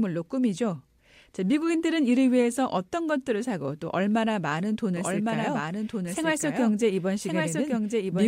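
From 4.97 s to the end, the speech is joined by a second, quieter copy of itself, running roughly a second behind and around 5 dB down. The copy is full-band and dry, with no reverberant tail, and it cuts in abruptly rather than fading up. This doubled audio track most likely comes from the same signal being captured again through a slower path, or from an edit leaving two misaligned copies in the mix.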